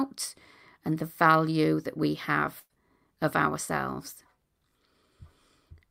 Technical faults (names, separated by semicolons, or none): burst of packet loss